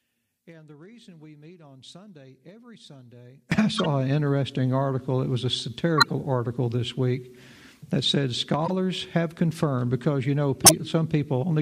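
From 0.0 to 3.52 s the sound sinks by about 24 dB to a faint residue, likely one channel inverted cancelling in the mono sum, rather than dropping to silence. Corrupt frames decoded then disrupt the sound at 3.75–3.86, 5.98–6.11, 8.66–8.72 and 10.64–10.73 s, with energy smeared across wrong frequencies instead of the sharp tick of a click.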